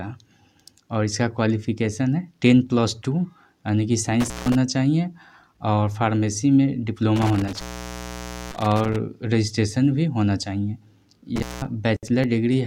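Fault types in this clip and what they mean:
Intermittent contact: A loose plug or cable briefly breaks the signal path. The sound cuts out with crackle at each edge, leaving faint hiss. Dropouts start at 4.20, 7.16 and 11.36 s. The line stays open for about 0.16, 0.9 and 0.19 s.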